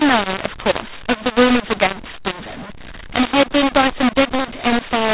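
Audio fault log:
Throughout: mu-law and A-law mixed up. The speech was coded as mu-law but decoded as A-law, scrambling levels so pauses hiss and peaks crackle, unlike clipping, which spares the quiet parts.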